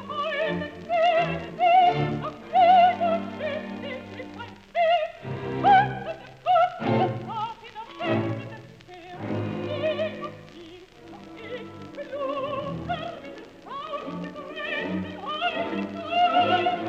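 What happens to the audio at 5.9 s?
Nothing goes wrong at 5.9 s; the audio carries on intact through that moment, with no dropout, click, distortion or other fault to be heard.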